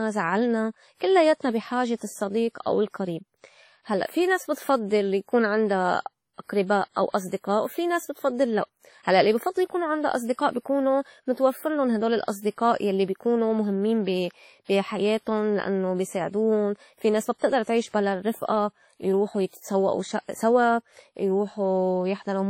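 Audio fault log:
Throughout: low-bitrate audio saved at a high bitrate. The speech carries the artefacts of heavy lossy coding, yet the file sits in a 320 kbit/s MP3 container, and the band above 18.6 kHz is empty. The damage points to a very low-rate first pass, likely WMA at around 32 kbit/s, later re-encoded as MP3; the high second bitrate keeps those artefacts intact but cannot restore what was discarded.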